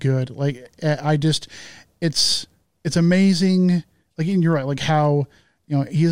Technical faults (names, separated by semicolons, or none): none